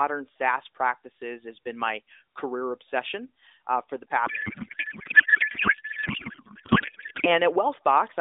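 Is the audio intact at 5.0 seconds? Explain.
No. From 4.26 to 7.29 s there is a codec payload misread. The AMR-NB stream is packed one way and unpacked another, which fits octet-aligned frames being parsed as bandwidth-efficient. Each frame still decodes, but with its bits shifted into the wrong fields, so the decoder produces garbled noise and warble that barely tracks the speech instead of the narrowband, lightly coded sound heard outside that span.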